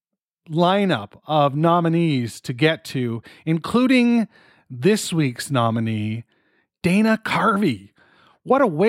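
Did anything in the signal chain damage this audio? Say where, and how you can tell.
No, nothing along the chain has left an audible mark on this speech recording, so there is no stage to point to.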